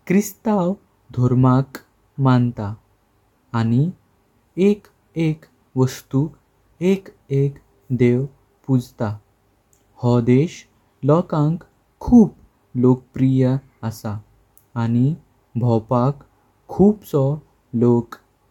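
No technical faults can be heard anywhere in this speech recording. Nothing breaks, stalls or shifts at any point in it.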